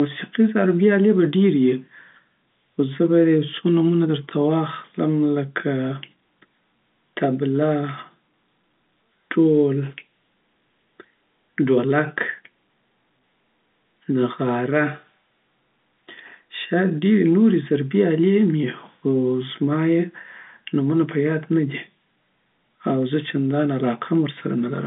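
No technical faults can be heard anywhere in the recording. The speech carries the narrow sound of G.711 telephone coding, with the line band running from about 200 Hz to 3.6 kHz and nothing above roughly 3.8 kHz, as expected from a 64 kbps A-law telephone path.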